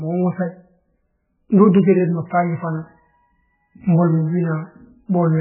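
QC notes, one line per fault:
Throughout: MP3 compression, likely. Heavy watery, swirly codec damage and nothing above 3 kHz. The encoder is starved of bits, consistent with a bitrate under 10 kbps, so weak frequency lines blink on and off between frames and the top end is cut.
3.41 s to 5.41 s: feedback whistle, a steady 4.3 kHz tone about 20 dB under the speech. It sits above the codec's cutoff, swelling and fading slowly, likely from a speaker-to-mic loop ringing just short of full howl.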